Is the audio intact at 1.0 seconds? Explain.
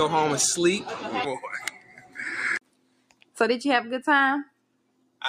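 No. At 1.0 seconds the sound is under a noise suppressor applied to music or sounds, and that fault runs through the whole clip. A suppressor built for speech treats held tones, ambience and reverb as noise and pulls them down. Onsets slip through, but sustained parts and tails sink by roughly 20 dB. The result pumps and flutters. The sound turns thin between attacks.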